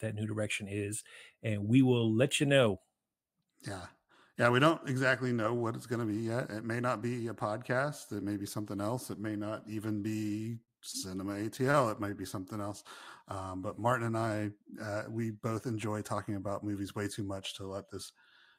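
At 10.92 s, just after "may not even be", a short stall from a late packet holds the sound for about 22 ms, stretched across 10.92 to 11.09 s. A second stall follows at 11.71 to 11.76 s, filling 28 ms. In both, the jitter buffer ran dry and the receiver extended the last speech until the packet arrived. Nothing is lost, but the sound lingers with a slight buzz or dip and the timing slips slightly later.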